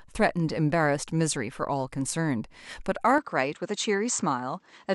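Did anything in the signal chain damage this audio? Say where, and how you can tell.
Yes. From 3.18 s to the end, the speech loses everything above 8.4 kHz with no gap or level jump, likely an input switched to a poorer device at the driver stage.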